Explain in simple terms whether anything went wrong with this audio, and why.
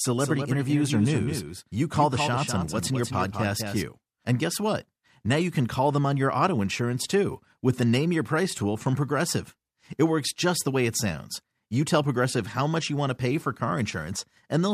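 A doubled audio track runs from the very start until 3.84 s. A second copy of the sound plays about a fifth of a second behind, a bit quieter, then stops suddenly. The likely cause is the sound being recorded twice.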